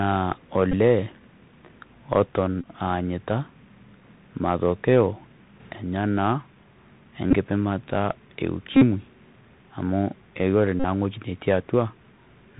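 Speech carried over a Bluetooth headset link runs through the CVSD codec for its whole length, and the damage is plainly audible. The codec sends one up-or-down bit per sample at 64 kbps with an adapting step, so the band stops at 4 kHz, sibilants come out scratchy, louder high-frequency sounds outrun the step and distort, and a fine granular hiss sits under the speech. On five occasions the link dropped voice packets and the headset chip decoded the previous packet's bits again, which is the Bluetooth headset packet repeated fault. Each repeat cycles every 3.75 ms, so a run of them turns into a buzz near 267 Hz. At 0.72 s about 15 ms is replaced, at 2.61–2.68 s about 26 ms, at 7.31–7.35 s about 19 ms, and at 10.80–10.84 s about 45 ms. At 8.73–8.83 s the losses add up to about 64 ms spread over roughly 83 ms, with the longest unbroken stretch around 50 ms, and that gives the most sustained buzz. 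At 5.60–5.72 s the level of the speech and the background noise steps up together by about 5 dB with no ramp. This sudden gain jump is likely caused by a digital gain setting or bit shift applied from one sample to the next.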